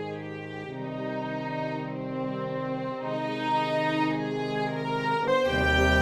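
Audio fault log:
5.27 s, stream segment skipped: the sound jumps abruptly ahead with a small blip, likely from one segment failing to load and playback resuming at the next.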